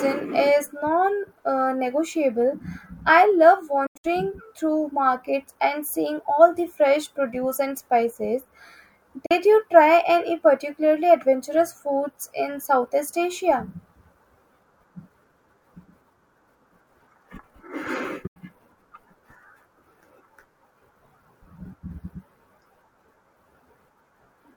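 At 3.86–4.05 s, 9.26 s and 18.27–18.37 s, speech cuts to silence and resumes further on with nothing repeated, likely a Bluetooth dropout of lost packets rather than a buffering stall.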